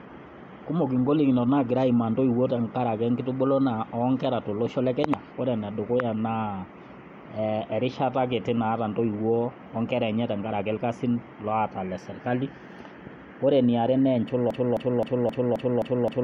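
From 14.51 s to the end, the speech hits a broken-record loop, a 263 ms snippet repeating seven times back to back, likely from the stream stalling on its last fragment.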